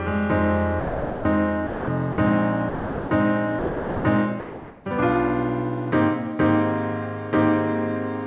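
A voice detector likely cut transmission, so comfort noise replaced the sound at 0.80–1.25, 1.67–1.88, 2.12–2.18, 2.69–3.11, 3.59–4.04 and 4.40–4.85 s, through a band ending at 4 kHz.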